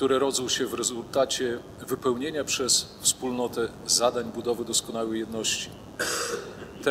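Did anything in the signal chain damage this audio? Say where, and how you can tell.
Yes. A mains buzz entered in the analogue wiring and runs for the whole clip, a steady raspy buzz roughly 25 dB below the signal. Switching spikes twice in every 50 Hz cycle show as evenly spaced harmonic lines into the kHz range on a spectrogram, and as repeating sharp ticks on the waveform.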